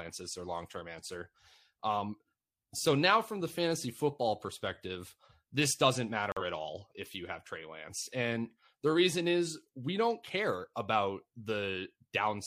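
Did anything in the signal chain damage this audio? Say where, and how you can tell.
Yes, at the codec: a corrupt frame muted from 6.32 to 6.42 s, right after "football perspective this doesn't". The decoder rejected damaged data, leaving an abrupt 0.1 s hole that fits a couple of codec frames, before "at all if you".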